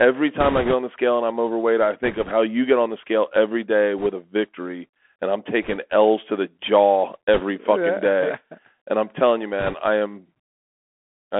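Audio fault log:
throughout, Bluetooth CVSD headset codec: audio held to roughly 250 Hz–3.4 kHz, scratchy s sounds where one-bit steps lag loud highs, and a steady granular hiss under the speech; constant, unlike bursts, fitting a 64 kbit/s stream.
0.40–0.74 s (before "on the scale and"), 2.04–2.32 s, 3.98–4.08 s, 5.63–5.78 s, 7.34–7.42 s (between "to the jaw" and "fucking day"), 9.60–9.75 s (between "and I'm telling you" and "I am"), bit errors on a Bluetooth voice link: brief rushing crackle with no sharp clicks, because each flipped bit only nudges one small step that quickly fades; heaviest in the first burst, lightest around 2 s.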